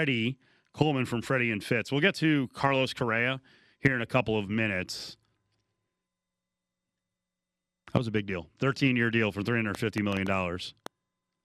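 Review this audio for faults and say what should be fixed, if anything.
A train of clicks runs from 9.75 to 10.87 s after "year deal for": about seven same-shaped, unevenly spaced ticks, likely interference, and their matching shape sets them apart from random crackle. To prevent it, shield and reroute cables away from nearby equipment and check the audio interface's connection and drivers.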